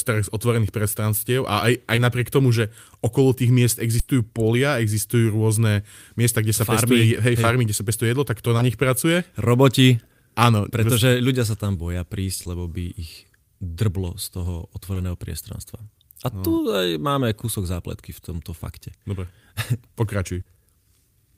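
A brief smear or wobble at 1.95–1.99 s, between "prestranstiev a aj aj" and "napriek tomu", is short concealed packet loss. About 20 ms of audio arrived too late and was bridged by extending the preceding sound. At 3.99–4.09 s, after "okolo tých miest", the sound stretches into a fading held buzz or hiss before resuming at "polia existujú rôzne miesta". This is a burst of packet loss: 80 ms went missing and was filled by a decaying continuation. The same short smears recur at 7.41–7.45 s, 8.57–8.61 s (after "pestuje jedlo tak to"), 12.43–12.47 s, 14.93–14.97 s and 20.41–20.47 s, with the last one covering 40 ms of missing audio.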